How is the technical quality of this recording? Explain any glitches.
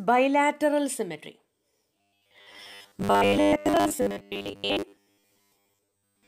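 From about 1.98 s to the end there's robotic sound from repeated short buffers. It's likely that new audio arrived too seldom, so roughly 10 ms chunks kept looping while most of the real signal was skipped, pinning a rigid, metallic 100 Hz buzz over the sound.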